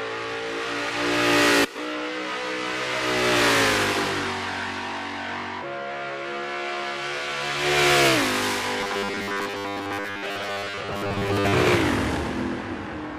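From 8.81 s to 11.54 s the sound turns into a rigid, metallic buzz pitched at 100 Hz, still loosely tracking the underlying audio but flattened into a mechanical drone. This is robotic sound from repeated short buffers, likely caused by audio arriving too slowly: the playback fills each gap by replaying the last chunk, which fits a 10 ms buffer, so most of the stretch is repeats while the real material is skipped.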